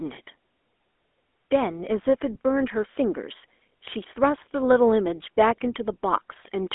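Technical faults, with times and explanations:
Throughout, GSM full-rate codec: plainly audible buzzy, gravelly roughness in a narrow telephone band of 250 Hz to 3.5 kHz, with nothing above 3.8 kHz. The codec models the vocal tract and drives it with sparse, regularly spaced pulses, which fits a 13 kbps link.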